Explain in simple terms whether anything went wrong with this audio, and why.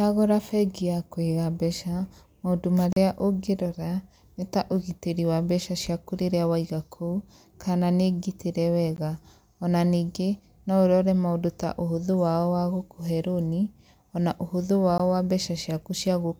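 Gap at a join of encoded pieces, at 2.93 s, 8.96 s and 14.98 s: the speech was encoded in 6-second chunks and joined untrimmed, so brief silences of 16 to 37 ms cut in.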